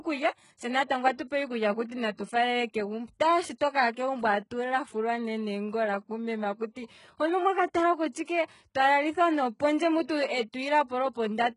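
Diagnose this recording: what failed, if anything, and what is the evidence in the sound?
Codec stage. Throughout, the speech sibilants sound gritty and nothing reaches above 11 kHz. This is likely HE-AAC at a very low bitrate, rebuilding treble from copied lower bands.

Codec stage again. There is pre-echo from 8.12 to 8.15 s, after "hono omwaka tala". About 27 ms of hiss leads an attack because block noise smears backward.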